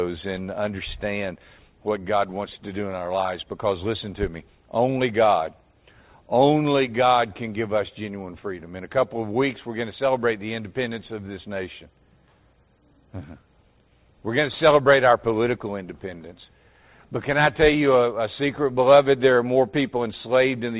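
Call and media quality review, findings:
No faults found in the reviewed audio; nothing to raise against capture, transport or playback.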